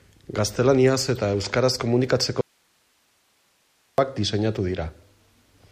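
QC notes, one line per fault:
2.41–3.98 s, audio dropout to a faint residue: the speech cuts off abruptly for about 1.57 s, leaving only faint hiss far below normal level. That points to a likely signal loss with the path still live. The hard edges and the hiss rule out a natural pause or fade.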